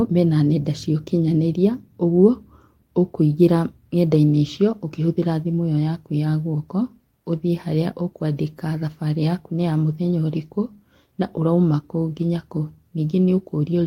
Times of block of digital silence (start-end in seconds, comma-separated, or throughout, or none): none